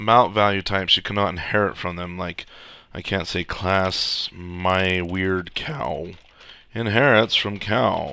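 From 3.7 to 6.0 s the sound carries a resampler restarted on every block. The converter, which points to a 44.1 kHz to 16 kHz conversion, processed each 50 ms block in isolation, with no memory of the neighbouring samples, so each block boundary carries a small discontinuity. Those errors repeat at a 20 Hz rate, once per block. It rides on the signal and vanishes where the sound is quiet.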